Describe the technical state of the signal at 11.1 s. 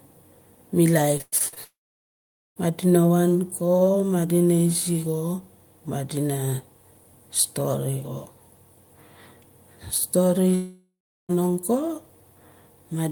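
At 11.1 s the speech is gone. Between 10.55 and 11.31 s a fading buzz or hiss continues the last sound, then near-silence remains for about 0.36 s. This is likely a long network dropout: packets stopped arriving, and about 0.74 s was never played.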